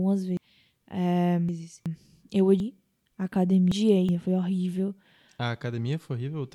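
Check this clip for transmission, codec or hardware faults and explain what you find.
Two stretches of this speech are scrambled by chunks out of order, from 0.37 to 1.86 s and again from 2.60 to 4.09 s. Each sounds like a jumbled, garbled moment. A segment of roughly 0.37 s was delivered three chunks late, so it plays after the material that should follow it. Nothing is missing, but the sequence is wrong, and the misplaced piece creates three abrupt joins.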